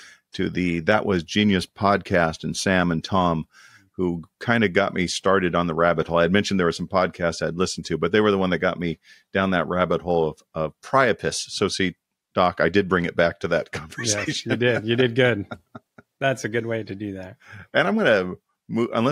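No technical faults can be heard in this speech recording.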